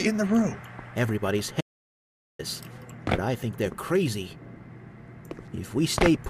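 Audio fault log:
1.61–2.39 s, audio dropout to silence: the sound cuts out mid-flow and resumes about 0.78 s later, leaving silence with no room tone. A quiet passage would keep the background, so this points to the input likely being lost while recording carried on.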